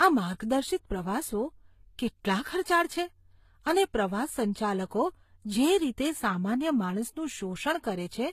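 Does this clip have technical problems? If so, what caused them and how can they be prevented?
Yes. Throughout the speech, two layers of artefacts can be heard: those of a very low-rate HE-AAC encode plus Vorbis's own, with nothing above 14.9 kHz. This is likely transcoding between lossy codecs, consistent with HE-AAC near 20 kbit/s re-encoded to Vorbis near 45 kbit/s, where the second encoder spends bits on the first encoder's damage. To prevent it, encode once, from the original uncompressed source.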